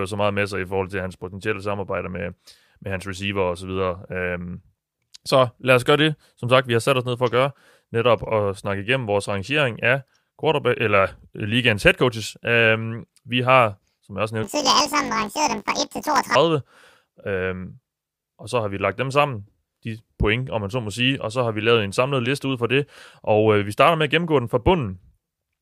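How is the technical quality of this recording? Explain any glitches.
There's one clear glitch in this speech clip. From 14.43 to 16.37 s, right after "har som jeg også", planar audio is read as interleaved. Each 20 ms block replays left then right at double speed, an octave up, so you hear a robotic 50 Hz buzz.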